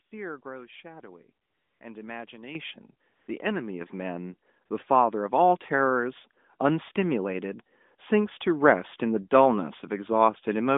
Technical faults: AMR comfort noise; microphone volume stepped up

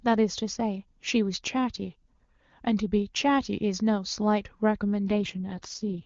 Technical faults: AMR rate drop

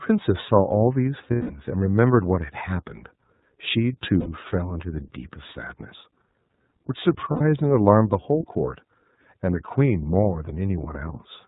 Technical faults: iLBC codec; lost iLBC frames

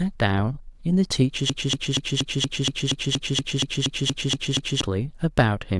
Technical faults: broken-record loop

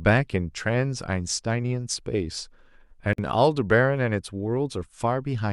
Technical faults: gap at a join of encoded pieces

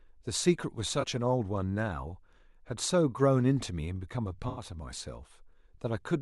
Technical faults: AAC frame loss with concealment

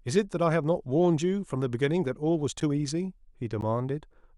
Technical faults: gap between stream segments

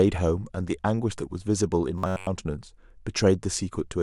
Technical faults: robotic sound from repeated short buffers

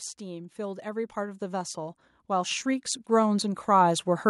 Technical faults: automatic gain rising

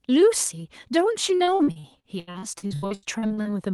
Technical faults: repeated packet loss (robotic sound)

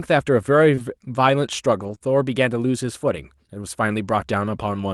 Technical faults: short concealed packet loss; lost packet rebuilt from error correction

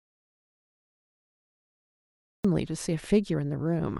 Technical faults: audio dropout to silence

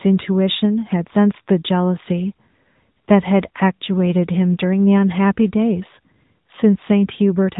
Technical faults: AMR narrowband mobile codec

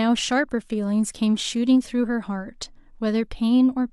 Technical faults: none

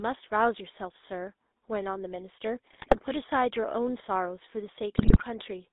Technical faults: GSM full-rate codec; GSM bit errors

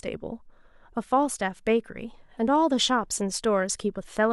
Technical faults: none

